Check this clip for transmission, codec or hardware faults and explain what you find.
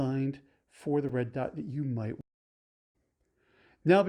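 One fault is present, a stream reconnect in this speech clip. At 2.21 s, just after "dot that you might", the connection dropped and the player had to reconnect and restart its decoder partway through the stream. Output falls silent for about 0.72 s, until 2.94 s. Because the stream kept running during the outage, playback resumes at a later point, roughly 0.7 s ahead. That stretch of speech is simply missing, so the sentence jumps forward across the gap.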